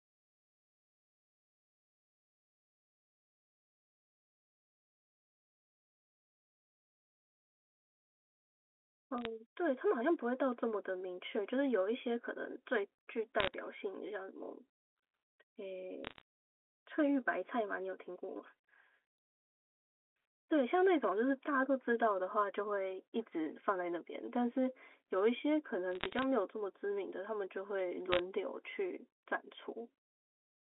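Bit errors on a digital phone line crackle through the speech at 9.18–9.26, 13.40–13.54, 16.05–16.21, 25.93–26.24 and 28.12–28.19 s. Flipped bits in the mu-law samples, a few per thousand, make sharp ticks over the narrowband telephone sound.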